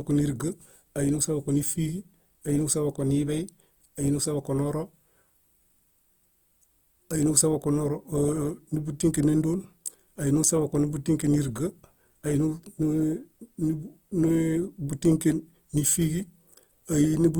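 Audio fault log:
Throughout: Opus compression. The speech is grainy and rough, with noise-filled upper bands but full bandwidth. This likely comes from Opus music-mode coding, and fits about 24 kbps.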